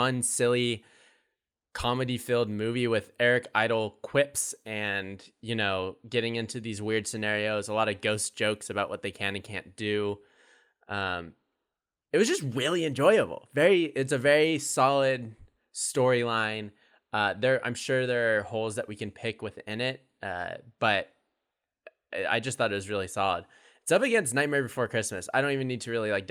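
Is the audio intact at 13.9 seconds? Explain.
Yes, the speech at 13.9 seconds plays through intact, with no dropout, click, distortion or other fault at that moment.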